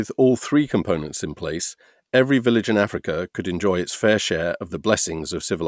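No technical faults can be heard anywhere in the speech.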